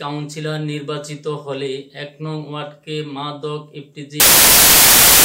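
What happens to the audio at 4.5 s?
At 4.5 s the audio is buried under loud, harsh broadband noise that began at 4.2 s and runs to the end at 5.24 s. These are samples built from the wrong bytes: each value is assembled with its bytes misordered or shifted, so rapidly changing low-order bits dominate.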